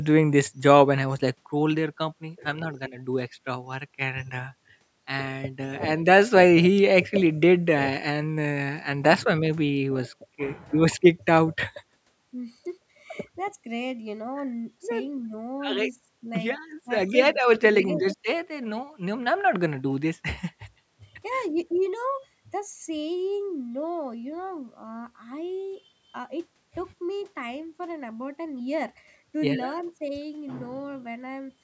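Nothing here counts as a fault: the speech has simply come through a call's microphone processing, so the lowest bass is trimmed away and nothing sits above about 8 kHz, both of which are normal for that path.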